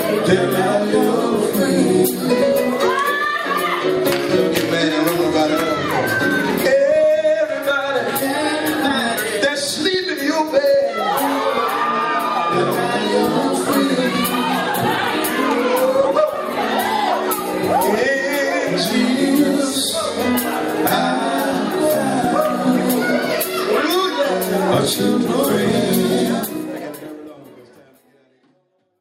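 No technical faults can be heard; at about 26 seconds a smooth fade-out begins and carries the sound gently down to the end.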